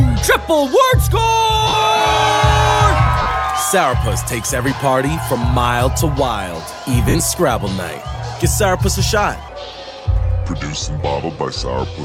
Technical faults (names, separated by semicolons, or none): lost LE Audio frames; section at the wrong speed